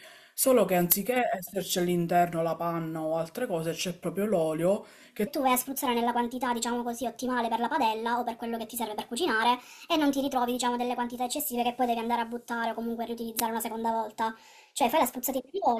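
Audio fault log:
5.27–15.80 s: section at the wrong speed. From 5.27 s to the end, the speech plays 1.4 times too fast. Pitch rises with it, by about five semitones. The voice turns high and hurried. This likely comes from playback or editing fitted to the wrong clock.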